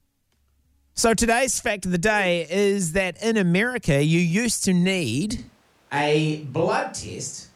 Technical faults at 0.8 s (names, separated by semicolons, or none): none